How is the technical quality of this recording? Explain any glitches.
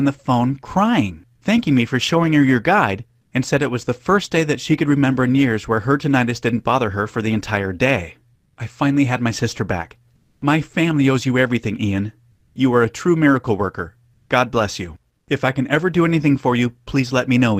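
There's one recurring glitch: five short stretches of comfort noise in place of the background, at 3.21 to 3.31 s, 8.35 to 8.57 s, 10.15 to 10.41 s, 12.31 to 12.55 s and 15.17 to 15.27 s, each lasting 100 to 260 ms. In the quiet gaps, where the background sits roughly 41 to 50 dB below the loud parts, the real ambience is swapped for a flat, featureless hiss that's about 3 to 8 dB quieter. The likely cause is Opus DTX: the sender stops transmitting during pauses and the receiver synthesises filler noise until the sound resumes.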